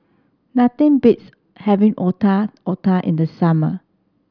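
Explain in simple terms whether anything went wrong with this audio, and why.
Nothing went wrong with this speech recording: the signal stays steady and intact all the way through, with nothing that stands out as a technical problem.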